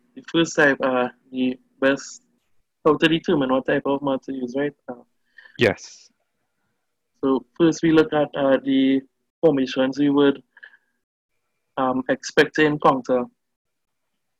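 Short bursts of crackle break out on loud peaks at 0.60–0.67 s, 1.85–1.88 s, 2.87–3.06 s, 5.62–5.68 s, 7.98–8.01 s, 8.54 s, 9.45–9.47 s and 12.38–12.90 s. The longest and harshest, at about 6 dB over, is at 12.38 s. These are hard clipping: peaks driven roughly 1 to 6 dB beyond what a stage could pass were sliced flat, and those squared tops sprayed harmonics high into the spectrum.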